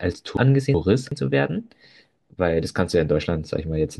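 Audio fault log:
0.37–1.12 s, chunks out of order: one 372 ms chunk plays a chunk late, swapping sequence; there are three hard joins and the passage sounds jumbled.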